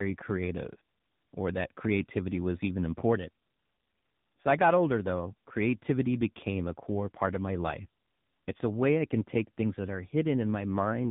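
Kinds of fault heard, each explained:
Tandem speech coding, throughout the clip: the speech passed through more than one coder in series, each decoding and re-encoding what the previous link had already degraded, so the losses stack. The roughness and warble fit a chain ending in a low-rate narrowband coder around 7.4 kbit/s, like AMR-NB, behind ADPCM and mu-law stages. Nothing is heard above 3.8 kHz, leaving the speech muffled as well as grainy.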